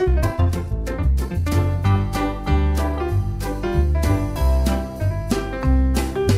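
From the start to 1.52 s there is a time-stretched section: the pace runs at about 1.95 times normal speed while the pitch holds steady, then drops abruptly to normal tempo. This is likely the result of software compressing that stretch to fit a shorter length, preserving pitch by discarding short slices of the signal. The result sounds rushed, with events crowded together, and brief sounds within that opening portion may be lost.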